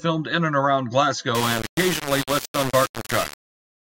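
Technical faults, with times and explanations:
1.35 to 3.9 s, low bit depth without dither: right after "in and around", the speech turns harsh and grainy, with a buzzing grit that rises and falls with the voice and quiet stretches that drop to silence or crackle. The likely cause is rounding to very few levels, consistent with roughly 3-bit quantisation and no dither, leaving error only about 10 dB below the signal. On a waveform it looks like coarse staircase steps. A spectrogram shows broadband haze that tracks the speech and vanishes in pauses.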